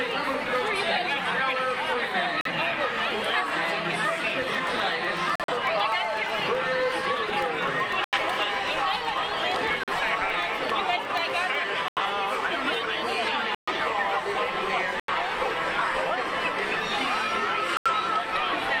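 At 2.41 s the everyday sound cuts out abruptly until 2.51 s. This is a corrupt frame muted: damaged compressed frames were rejected by the decoder and the player filled the gap with silence. The hole starts with a hard edge, and timing carries on intact afterwards.

From 3.80 s to 11.55 s there are periodic USB or driver dropouts. About every 0.125 s, roughly eight times a second, around a millisecond of audio is replaced by silence. Some seventy of these evenly spaced losses are heard as a steady ticking that rides on the sound. They point to a background task repeatedly stalling the audio driver or USB transfer.

The same frame-muting fault returns at 5.36 to 5.53 s, 8.03 to 8.18 s, 9.83 to 9.92 s, 11.84 to 12.06 s, 13.55 to 13.73 s, 15.00 to 15.13 s and 17.75 to 17.91 s. Each is a sudden silent gap. The gap at 11.84 s is the longest at about 0.23 s, which suggests a longer run of consecutive rejected frames.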